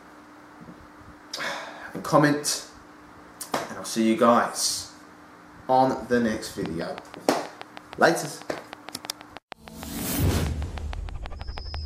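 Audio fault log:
6.66–11.75 s: train of clicks. Regular ticking at about 6.3 clicks per second, roughly thirty in all, standing about 10 dB above the signal and audible through pauses too, likely from interference or a faulty connection or supply. Waveform shows evenly spaced spikes; spectrogram shows thin vertical broadband lines.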